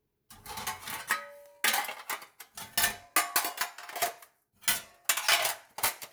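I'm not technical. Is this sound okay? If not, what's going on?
Yes, this sound is okay; nothing is wrong.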